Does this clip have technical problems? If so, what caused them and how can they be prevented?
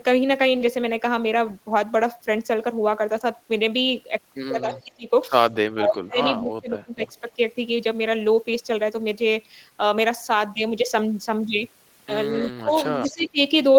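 Yes. Speech suppressed in double talk occurs at 4.61 to 5.11 s, 5.65 to 7.38 s, 12.59 to 12.73 s and 13.06 to 13.39 s. The speech dips by roughly 20 to 30 dB, deepest in the long stretch near 6 s, while the far side is also talking. The likely cause is an echo canceller that could not tell this talker from loudspeaker echo and turned everything down. Prevention: use a headset or an echo canceller with better double-talk detection.

Echo leak appears at 4.75 to 4.84 s, 12.37 to 12.49 s and 13.02 to 13.29 s as faint copies of the speech arriving about 0.23 to 0.25 s late, roughly 20 to 25 dB below the direct sound. This is likely loudspeaker sound that reached a microphone and slipped past the echo canceller before being sent back. Prevention: lower speaker volume or use headphones on the side playing the call aloud.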